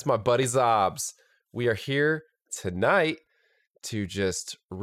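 Clock drift buffer slips click every 1.21 s from 0.43 s, after "my buddy", to 4.06 s, likely drifting clocks, each a vertical spectrogram line.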